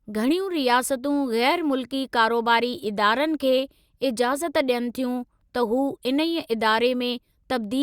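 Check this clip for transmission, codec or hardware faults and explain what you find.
Checking the clip turned up no faults to report.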